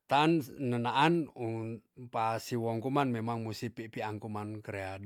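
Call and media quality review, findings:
No faults found in this speech clip. Nothing audible to flag for follow-up.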